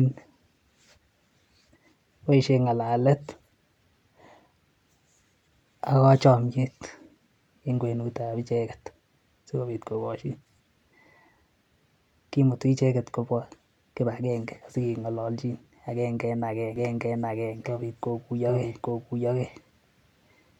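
Speech, and from 16.76 s to the end there's a doubled audio track: a second full-band copy of the same speech sits around 0.7 s behind the original, at roughly the same level, so everything arrives twice. The copy is completely dry, with no decay or room colour, and it cuts in abruptly rather than fading up. The likely cause is a second, slower capture path or an edit that left two copies misaligned.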